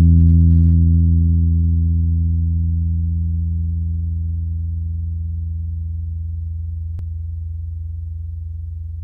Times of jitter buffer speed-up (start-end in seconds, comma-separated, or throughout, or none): none